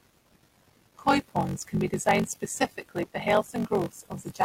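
Through the whole recording, a block size mismatch (padded) sets a steady buzz under the speech at about 46.9 Hz. One stage hands over blocks that are shorter than the blocks the next stage reads, and the remainder of each read block is filled with zeros. Every block therefore carries a brief silent gap, and that regular interruption is the buzz. The pattern fits a reading stage using 1024-sample blocks, fed about 86% of that amount each time. The speech runs slow, at about 0.861 times normal speed, while the pitch stays close to natural because the samples themselves are played at the correct rate.

From 3.02 to 3.04 s, just after "can be designed specifically", there is damaged data in a compressed stream. A short stretch of the encoded stream is corrupt, so the decoder misreads or rejects those frames, loses sync, and scans ahead for the next valid frame header. The result is a brief chirp or blip lasting about 24 ms.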